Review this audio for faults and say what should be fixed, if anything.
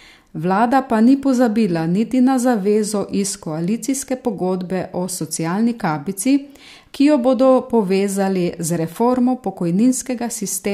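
Nothing here needs fixing; I couldn't hear any technical fault anywhere in the recording.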